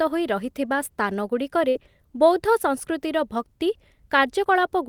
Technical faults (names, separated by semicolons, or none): burst of packet loss